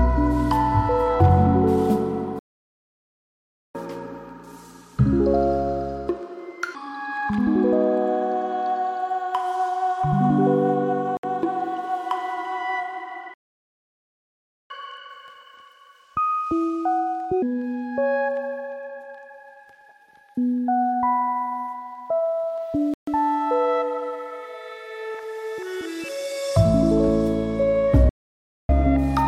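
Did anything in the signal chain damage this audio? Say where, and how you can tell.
Yes. At the playback stage the audio halts mid-flow from 2.39 to 3.75 s and from 13.34 to 14.70 s (about 1.36 s each), and from 28.09 to 28.69 s (about 0.6 s). This is a playback stall, likely the player's buffer running dry or its thread being blocked.

Each stall is followed by catch-up at higher speed, also a playback-stage effect. The player resamples its backlog, so speed and pitch rise together: 1.25× from 3.75 to 6.75 s (about four semitones up), 1.5× from 14.70 to 17.42 s (about seven semitones), and 1.1× from 28.69 s to the end (about a semitone and a half).

On the wireless link there are two brief dropouts to silence: 63 ms at 11.17 s and 136 ms at 22.94 s. These gaps are far shorter than the player stalls and have no speed-up after them. That pattern points to a Bluetooth stall, likely interference delaying packets until the headphone buffer emptied.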